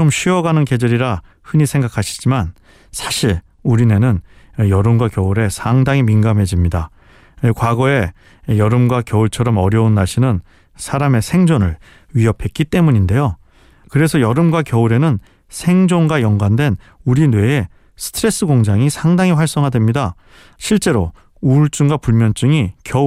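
No technical fault can be heard anywhere in the recording; the speech signal stays steady and intact throughout.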